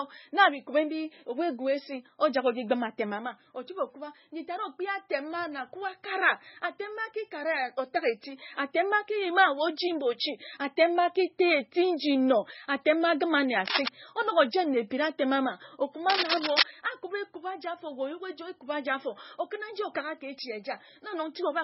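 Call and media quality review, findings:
Heavy MP3 compression throughout: watery, swirly speech, smeared attacks, no content above 5.6 kHz. Likely cause is a starved MP3 encoder at a bitrate around 16 kbps, zeroing weak frequency lines frame to frame and cutting treble at a fixed point.

Cable scratch noise at 13.66–13.88 s, after "atem ma agima nne", and at 16.08–16.63 s, after "atem ama": dense, uneven scratching bursts at roughly speech level. Likely a worn cable, connector or DC-carrying control being moved, with contact resistance changing rapidly.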